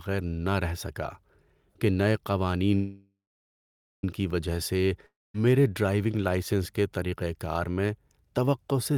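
At 2.75 s the speech stalls until 4.04 s, a call audio freeze: the last sound hangs as a fading buzz or hiss, then about 0.84 s of silence, before resuming exactly where it stopped. Packets were likely delayed and the jitter buffer emptied, adding about 1.28 s of lag.

At 5.06 s a long network dropout follows, lasting to 5.35 s: a brief fading tail, then about 0.2 s of silence, and the speech returns about 0.28 s further on, that stretch lost, likely because those packets never arrived.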